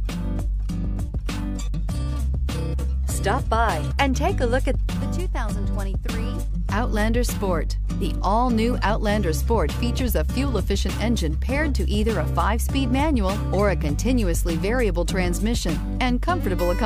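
Nothing technically wrong turns up anywhere in this audio, so there's nothing here to time or trace back to a cause.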